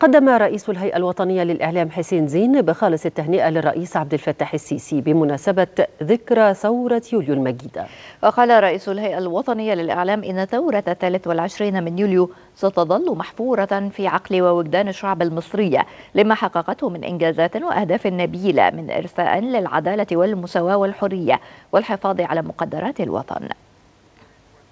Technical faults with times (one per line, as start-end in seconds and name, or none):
none